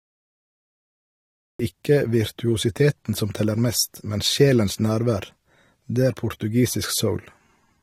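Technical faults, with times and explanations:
0.00–1.59 s, cut-off start: the opening is digital silence until 1.59 s, where the speech enters abruptly in the middle of a sound with no natural attack, because capture began late. The waveform shows a flat line jumping straight to mid-sound signal, and the spectrogram shows an empty stretch ending in a sharp vertical edge.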